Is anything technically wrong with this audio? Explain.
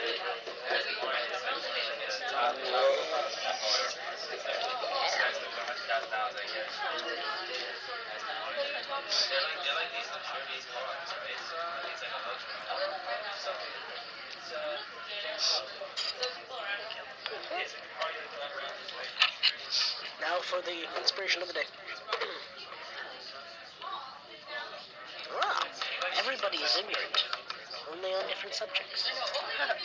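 No, nothing technically wrong stood out on listening to this audio.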